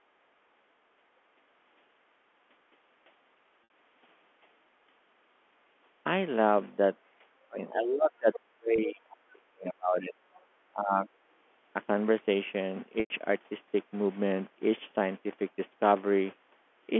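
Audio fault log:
3.64 to 3.70 s, 8.76 s and 13.00 to 13.10 s: packet loss with pitch repetition. Three gaps of about 60 ms, 20 ms and 100 ms were bridged by looping the last pitch cycle. The 20 ms gap is only a brief held buzz. The 60 ms one stretches the sound a little, fading as the loop runs on. The 100 ms gap outlasts the fade, drops to near silence, then cross-fades back in.
7.48 to 10.14 s and 10.72 to 11.08 s: speech suppressed in double talk. The talker's level sags, about 2 s in total in the first stretch, dipping by around 40 dB at its deepest. A shorter, milder dip of about 15 dB follows, lasting roughly 0.4 s. The likely cause is an echo canceller that could not tell near speech from far-end echo and attenuated both.
8.33 to 8.40 s and 10.34 to 10.41 s: other side's voice leaking through. Two brief scraps of a second voice surface, the first about 20 dB below the talker and the second fainter at around 35 dB down. 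Each lasts about 70 ms. This is likely loudspeaker echo that the canceller left behind in the microphone signal.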